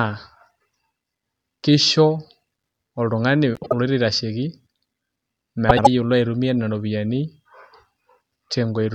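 At 3.55–3.73 s, just before "oloito aitashoki", and 5.69–5.87 s, frames out of order swap two adjacent 78.4 ms blocks, causing a garbled flutter.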